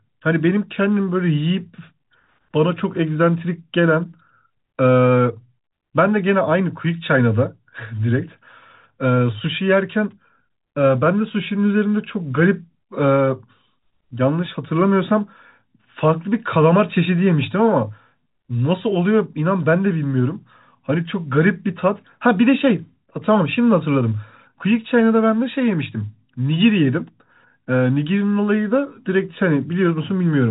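It's a speech recording carried over ordinary telephone coding, with everything above about 3.8 kHz gone as that format requires, and nothing in it goes wrong.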